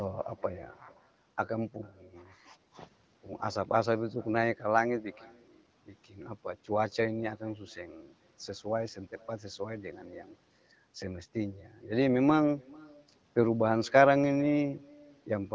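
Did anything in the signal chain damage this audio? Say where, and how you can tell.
Yes. Throughout this speech, an echo with no canceller returns the talker's voice roughly 0.4 s later at about 28 dB below the speech, a faint, thin shadow. The far end's loudspeaker feeds its microphone and call processing removes nothing. On a spectrogram, each syllable trails a weak, delayed ghost.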